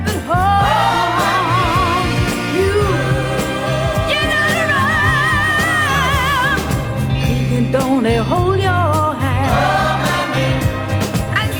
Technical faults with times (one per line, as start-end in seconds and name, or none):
none